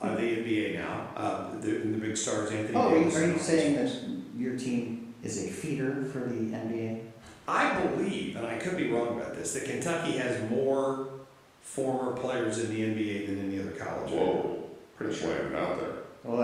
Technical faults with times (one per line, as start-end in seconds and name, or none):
none